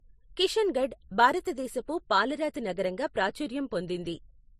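Speech with transcoding between lossy codecs throughout: nothing above 15.2 kHz, with the artefacts of both codecs layered together, likely a low-bitrate MP3 re-encoded to Vorbis at similar bitrate.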